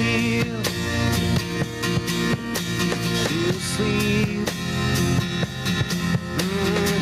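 Gain pumping runs through the whole clip: a level swing of around 15 dB, squashing loud and soft parts together. The likely cause is input gain set far too high, with a fast limiter clamping each peak.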